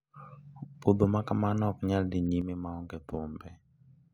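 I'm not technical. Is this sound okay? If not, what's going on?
No, not quite. At 2.42 s, right after "ok nyal dhi", everything suddenly drops to noticeably quieter, background hiss included, and stays there to the end. That's a sudden gain jump, likely a volume setting applied instantly instead of eased in.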